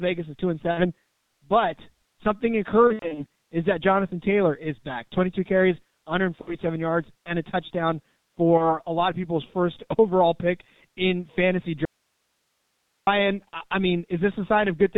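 The speech runs through the G.723.1 codec at 6.3 kbit/s throughout. Heavy coding leaves it muffled and hoarse, with nothing above 4 kHz and smeared consonants.

VoIP packet loss concealed by the speech codec occurs at 0.71 to 0.91 s after "is two and", 2.87 to 3.26 s, 6.41 to 6.58 s, and 8.57 to 8.72 s between "yards and a touchdown" and "a lot of people's". The decoder fills lost frames by repeating and fading its last sound, so each gap turns into a fading buzz or coloured noise, then recovers slowly. The second event is the worst, with 180 ms lost in scattered runs.

From 11.85 to 13.07 s, after "overall pick in fantasy", there is an audio dropout to a faint residue. The speech cuts abruptly to hiss about 50 dB down, likely because the signal was lost while the path stayed live.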